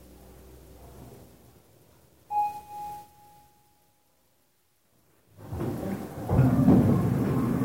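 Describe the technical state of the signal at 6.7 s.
At 6.7 s the everyday sound is in hard clipping, which runs from 6.39 s to 6.80 s. The signal is driven about 6 dB past what a stage in the chain can carry, so every peak is sliced off flat. Those abrupt corners throw energy into harmonics high up the spectrum, heard as crackle on the peaks. Soft saturation would round the peaks and sound warmer; here the edge is brittle and crackling.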